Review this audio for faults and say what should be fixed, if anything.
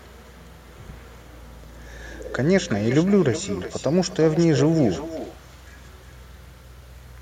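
Echo with no canceller runs through the whole speech clip. Each phrase comes back about 0.4 s later, about 14 dB quieter and thin. The far end's loudspeaker feeds its microphone, and nothing removes that copy. Enable acoustic echo cancellation at the far end, or have that side use a headset.

Skips occur at 1.64 s and 4.59 s. Each drops a short slice, around 50 ms, and the two sides are butted together with no silence. The spacing fits a 3-second chunk size, so the likely cause is audio missing between chunks. Overlap or double-buffer the chunk handover so no samples are lost.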